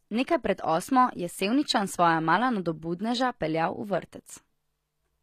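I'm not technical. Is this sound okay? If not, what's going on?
No. From start to finish, the speech carries plainly audible damage, most likely from HE-AAC compression. This kind of compression stores the lower, fuller part of the sound properly. It then fakes the treble by copying lower parts upward. The result still sounds bright, but it isn't the real top end. Here the s sounds come out gritty, metallic or lispy. Above 14.9 kHz there is nothing at all.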